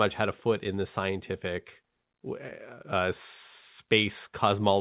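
No technical faults are audible.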